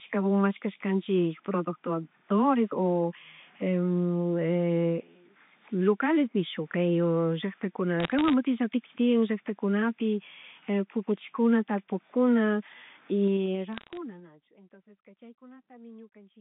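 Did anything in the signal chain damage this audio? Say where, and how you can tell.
Yes. Bit errors on the digital phone line, around 8.00 to 8.33 s and again 13.73 to 13.97 s, show up as sharp crackly ticks over intact speech. Flipped bits corrupt individual samples.

Zipper noise from 13.23 to 14.35 s comes from a gain stage in call processing or the buffer path. A drop of roughly 25 dB is applied in unsmoothed 2 dB steps about ten times a second, so you hear audible zipping.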